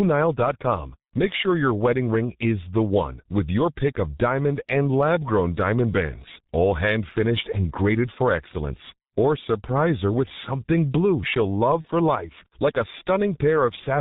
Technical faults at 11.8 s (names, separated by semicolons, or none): G.723.1 codec; VoIP packet loss concealed by the speech codec